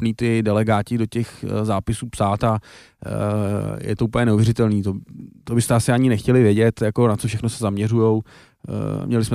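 No technical faults can be heard anywhere in this speech recording.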